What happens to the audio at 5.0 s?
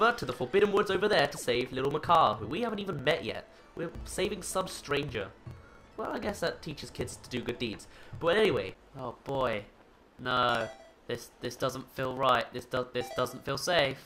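At 5.0 s the sound is inside a run of periodic USB or driver dropouts lasting from 0.11 s to 13.97 s. Every 60 ms a few milliseconds of audio are skipped. A blocked bus or driver causes this. It comes through as steady ticks while the signal plays.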